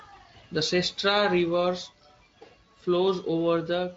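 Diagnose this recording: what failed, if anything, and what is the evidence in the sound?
No stage of this recording has failed. The speech carries only a faint codec coloring, consistent with Speex working at a high setting of around 28 kbps.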